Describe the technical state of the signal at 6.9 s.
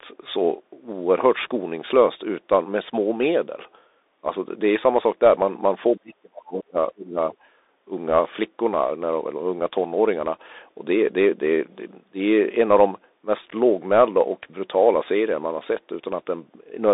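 At 6.9 s the speech sits inside a suppression dip from 5.95 to 7.36 s, falling by up to about 35 dB. This is likely speech suppressed in double talk, where the echo canceller mistook overlapping talk for echo. Throughout, the Bluetooth CVSD headset codec cuts everything above 3.8 kHz. Its sloped one-bit coding, which fits a 64 kbps link, adds granular hiss and scratchy sibilants.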